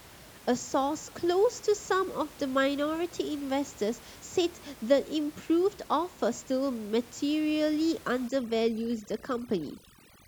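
From 8.28 s right through to the end, you can hear overdone noise removal kick in. The room noise, sitting about 22 dB under the speech before that point, gets pushed down so hard that individual frequency bands near the noise floor are dropped almost to nothing. The quieter parts of the voice go with them. The gaps turn to near silence dotted with twinkly little specks.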